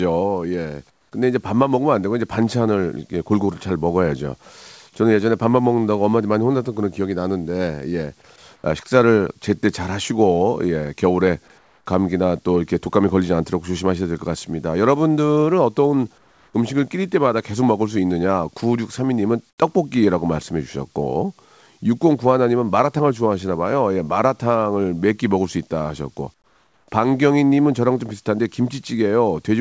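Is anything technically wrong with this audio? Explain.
Yes. At 0.90–1.12, 8.56–8.64, 11.58–11.86, 16.18–16.54, 19.50–19.58 and 26.34–26.88 s there is comfort noise in place of the background, likely from discontinuous transmission: during each pause, synthetic noise stands in for the real room sound. It sits about 3 to 10 dB lower. A spectrogram shows smoother, featureless bands, and the waveform shows quieter patches.

At 4.44–4.46 s there is sound dropped by the voice detector, likely because the detector mistook some sound for background and stopped transmitting. About 10 ms of speech is lost and replaced by comfort noise. The waveform shows a brief flattened notch. On the spectrogram, speech detail breaks into plain noise before returning. Across the clip, the spectrogram has nothing above 8 kHz, which fits a G.722 call path.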